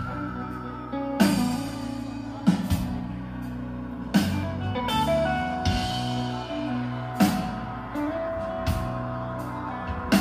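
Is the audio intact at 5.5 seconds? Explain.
Yes, the audio is intact at 5.5 seconds, with no fault audible at that moment.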